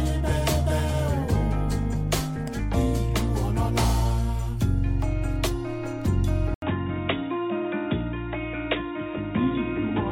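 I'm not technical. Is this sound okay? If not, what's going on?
No. At 6.54 s the input likely switched to a poorer device. After a brief gap, the sound turns muffled and a little quieter until the end.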